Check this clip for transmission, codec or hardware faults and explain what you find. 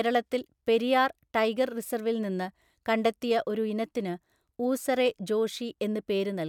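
No faults detected.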